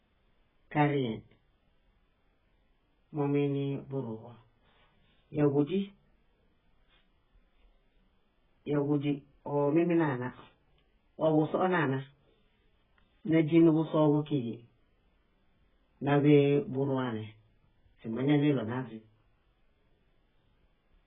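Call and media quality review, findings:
AAC compression, likely, throughout the speech: dull, band-limited sound with nothing above 3.8 kHz; heavy smearing and warbly, fizzy texture on sibilants and held vowels. Consistent with a very low bitrate near 8 kbps forcing a lowered cut-off and coarse spectral quantisation.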